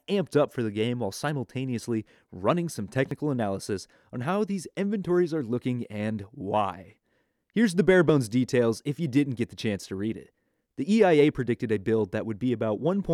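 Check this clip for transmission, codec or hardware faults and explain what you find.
There are two skips of audio missing between chunks, at 3.11 s, between "while simultaneously running some" and "analysis on how these", and at 8.09 s, between "the bare" and "details if you didn't". Each drops about 20 ms and the two sides butt together with no gap, giving a tiny jump in the speech. The 5 s spacing points to a recorder likely losing a sliver each time it swaps chunks. A waveform shows an abrupt discontinuity, and a spectrogram shows a thin vertical seam.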